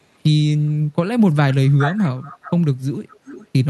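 From 1.54 to 2.51 s, then faintly from 3.1 to 3.47 s, the speech returns as an echo leak, a distinct copy trailing by 418 ms, about 10 dB and then 20 dB down. Likely a far-end echo canceller letting loudspeaker pickup through. Unlike room reverberation, it is a separate, delayed repeat.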